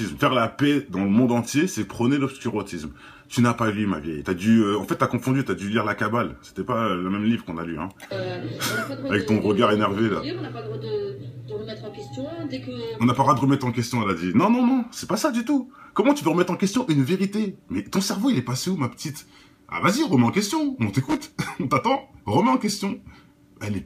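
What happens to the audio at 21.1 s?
At 21.09 to 21.27 s there's a short burst of loose connector crackle: a worn contact keeps making and breaking, chopping the signal into an irregular scratchy crackle.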